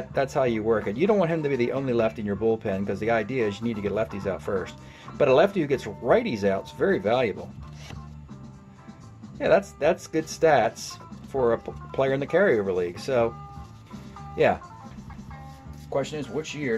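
At 15.13 s the sound drops out for a few milliseconds, marked by a small tick, and then resumes from a different point, so the flow of the audio jumps abruptly instead of continuing. This is a CD skip: a knock or a surface flaw threw the player's laser off its track onto another turn of the disc's spiral. The player briefly muted while it reacquired the track, then carried on reading from the new position.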